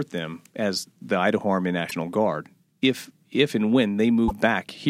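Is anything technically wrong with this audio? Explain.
Yes, there are two brief hits from damaged data in a compressed stream, at 1.87 to 1.93 s and again at 4.25 to 4.31 s, each lasting around 60 ms. In both spots some of the stored bytes are corrupted, so the decoder can't make sense of those frames, loses its place, and has to hunt for the next valid frame header before it gets going again. What you hear is a short chirp, squawk, click or brief hole cutting through the speech right at those moments.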